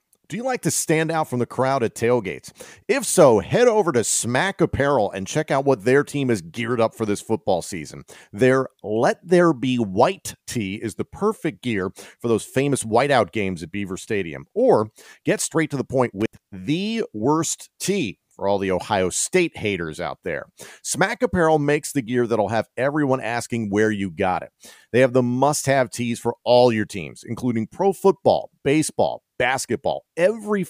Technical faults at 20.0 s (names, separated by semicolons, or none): none